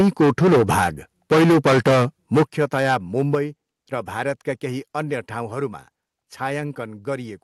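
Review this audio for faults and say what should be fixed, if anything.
Harsh, crackling distortion sits on the loudest syllables from 0.0 to 0.88 s, 1.31 to 2.05 s and 2.34 to 3.35 s. The likely cause is microphone overload: peaks drive about 13, 14 and 12 dB past the converter's ceiling, flattening roughly a fifth, two-fifths and a small share of samples. Lowering the microphone's input gain before the call would prevent it.

The speech and background drop abruptly in level twice, at 2.43 s by about 10 dB and at 3.35 s by about 5 dB, just before "र भारतका केही अन्य". This points to a microphone volume stepped down, likely by the call software reacting to the clipping. Setting a safe input level beforehand and disabling automatic gain adjustment would prevent it.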